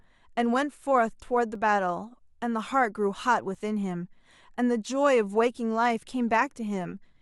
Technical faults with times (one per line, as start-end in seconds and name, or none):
1.55 overlap between stream segments
3.55 overlap between stream segments
5.54 overlap between stream segments